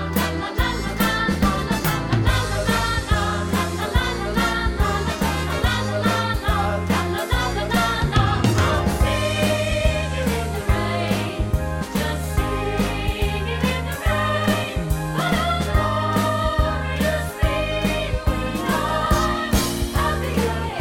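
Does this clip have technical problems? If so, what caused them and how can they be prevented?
No, there are no audible technical problems here.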